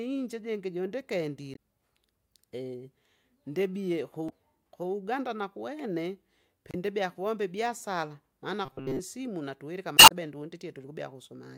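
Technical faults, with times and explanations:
1.53–1.57 s, 4.26–4.32 s, 6.71–6.75 s and 9.95–10.12 s: damaged data in a compressed stream. Each is a brief chirp, squawk, click or short hole where corrupted frames are misdecoded and the decoder hunts for sync. The last adds about 8.5 ms. On a spectrogram, short smeared broadband blocks break the speech harmonics.
5.79 s: electrical switching spike. A sharp snap or tight cluster of clicks sits on top of the speech, likely from a nearby switch or static discharge arcing into the line. The waveform shows a needle-thin, near-vertical transient, and the spectrogram a bright vertical line spanning all frequencies.
8.65–9.00 s: robotic sound from repeated short buffers. The speech becomes a rigid metallic buzz at 133 Hz, likely from audio arriving too seldom so a chunk of about 7.5 ms is replayed, with most of the real signal skipped. The spectrogram shows evenly spaced flat harmonic stripes, and the waveform a repeating pattern.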